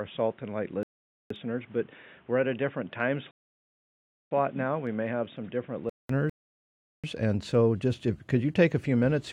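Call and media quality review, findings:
Input likely switched to a poorer device, 0.0–6.09 s: band ends near 3.8 kHz, level about 5 dB down, new hiss about 30 dB below signal. Fuller sound returns after a 200 ms gap, unlike gradual codec dulling.

Rebuffering stall, player buffer underrun: silences at 0.83–1.31 s (0.47 s), 3.31–4.31 s (1.0 s), and 6.30–7.04 s (0.74 s) before "and so just if". Playback resumes exactly where it stopped, adding time without losing audio, unlike packet loss.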